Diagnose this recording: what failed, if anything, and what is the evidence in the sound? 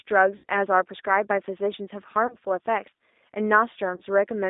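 Codec stage: the whole clip carries G.729 coding damage. Speech sounds rough and slightly synthetic. The band runs only from about 250 Hz to 3.7 kHz. That fits an 8 kbit/s G.729A path, which rebuilds each 10 ms frame from a filter, a pitch predictor and a few pulses.

Network stage: there are three spots of VoIP packet loss concealed by the speech codec, at 0.36 to 0.44 s, 2.27 to 2.36 s and 3.96 to 4.01 s. Each turns into a stretched tone or coloured noise that fades, then recovers slowly. The decoder stretched its last pitch and filter. The first gap fits about 80 ms lost, the others about 20 ms each.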